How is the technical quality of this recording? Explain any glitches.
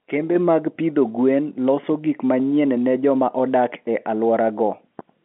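The speech is technically sound, carrying the narrow band of G.711 telephone coding, with content between about 200 Hz and 3.5 kHz and nothing above about 3.9 kHz, as an ordinary phone line would deliver it.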